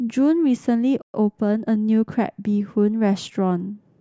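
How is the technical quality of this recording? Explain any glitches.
The speech is interrupted by a playback stall, followed by a stretch of sped-up catch-up.

Playback stall, 1.02 to 1.14 s: the sound cuts out mid-flow for about 120 ms of silence. The player likely ran out of buffered data or had its thread blocked, so nothing reached the output until it recovered and carried on.

Time-compressed catch-up, 1.14 to 2.32 s: after the gap, the player works off its backlog by removing small slices and cross-fading the joins. The speech runs about 1.1 times faster at its normal pitch, sounding slightly hurried.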